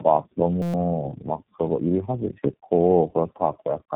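Throughout, the speech sounds rough, muffled and warbly, with nothing above 3.8 kHz. This is tandem speech coding: three successive speech coders, which fits AMR-NB twice and then iLBC, each re-coding the previous one's degraded output.

From 0.62 to 0.74 s a steady 172 Hz buzz replaces the speech. This is a system hang loop: a frozen system kept replaying one 5.8 ms buffer, which fits 256 samples, twenty times, and about a tenth of a second of audio was lost.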